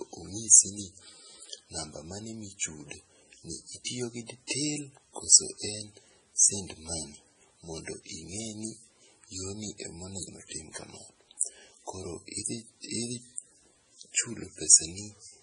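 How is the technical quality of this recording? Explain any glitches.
The recording is heavily compressed throughout and has one brief smeared attack.

MP3 compression, throughout: the treble stops sharply at 10.4 kHz and the speech sounds watery and swirly, likely from MP3 encoding at a low bitrate near 24 kbps.

Pre-echo, 11.37 to 11.41 s: quantisation noise spread across a transform block leaks 40 ms ahead of a sharp attack, so a short hiss precedes it and softens it.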